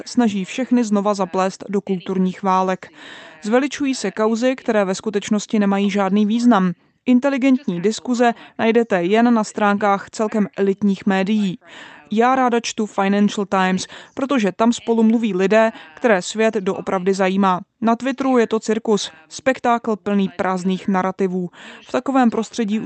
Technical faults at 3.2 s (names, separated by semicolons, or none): none